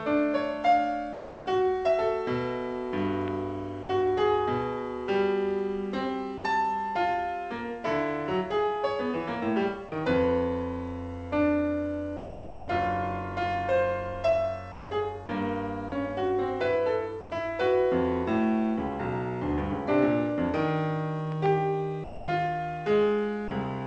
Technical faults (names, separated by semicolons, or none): sound dropped by the voice detector; loud pop; sound chopped by the voice detector